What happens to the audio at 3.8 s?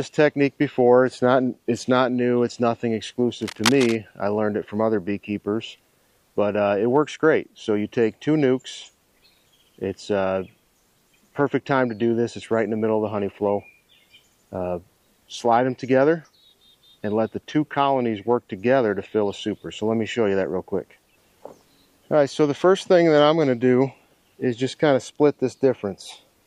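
A burst of dense, uneven scratching and rustling sits over the audio from 3.42 to 3.96 s, so 3.8 s falls inside it. The noise is strong, only a few decibels below the sound itself, and it crackles irregularly rather than hissing steadily. This is cable scratch noise, likely from a worn cable, connector or control being moved, its contact resistance jumping rapidly and pushing erratic noise bursts into the signal for about half a second.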